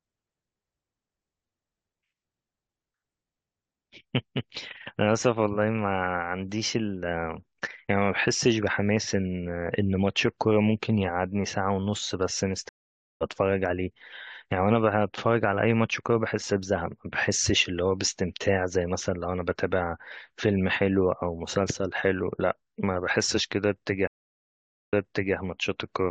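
At 12.69 s the speech stops dead, the first stream reconnect. About 0.52 s of silence follows. A fresh decoder then picks up roughly half a second later, so some speech is skipped. At 24.07 s a second reconnect gives 0.84 s of silence. Playback resumes 0.44 s earlier, repeating speech already heard.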